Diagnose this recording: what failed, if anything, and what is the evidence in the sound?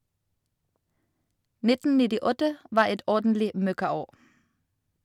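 A gain stage ahead of the converter let the speech peaks run past full scale, producing hard clipping from 2.78 to 2.82 s. Overdriven by about 2 dB, the waveform tops are sliced flat, and the added high harmonics give a brief crackle on those peaks.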